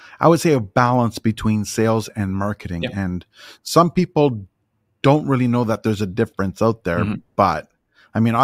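Nothing stood out as a technical fault on listening to this speech recording.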